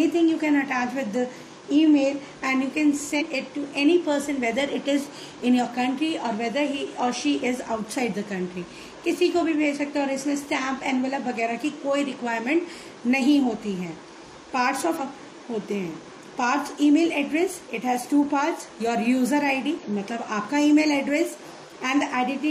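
At 3.16 s a brief glitch interrupts the audio. It lasts about 60 ms and ends by 3.22 s. The same fault returns at 14.96 to 15.01 s and at 19.79 to 19.84 s, each about 50 ms long. All three are damaged data in a compressed stream. Some bytes there were lost or corrupted. The decoder misread those frames, lost sync and hunted for the next valid header. That failure produces each short glitch.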